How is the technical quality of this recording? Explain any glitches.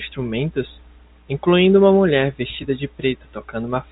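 No glitches can be heard anywhere in the recording. It carries the narrow sound of G.711 telephone coding, with nothing above about 3.8 kHz and at most a faint quantisation hiss that rises and falls with the level of the speech.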